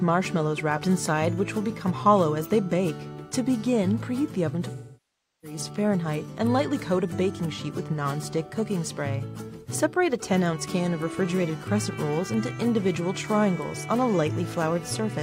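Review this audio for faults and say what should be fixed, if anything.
From 4.75 to 5.58 s the sound smears into a grainy, hollow wash, sags toward silence, then fades back in. This is AAC frame loss with concealment: about 0.68 s of coded audio went missing, which fits a run of around 16 frames. The decoder rebuilt the gap from the last good spectrum, using shuffled signs and estimated energy, and faded the patch out as the gap lengthened. To prevent it, protect the AAC stream with retransmission, forward error correction or deeper jitter buffering so frames are not dropped.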